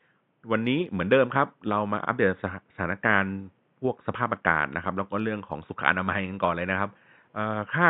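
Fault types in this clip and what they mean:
No technical faults are audible in this recording.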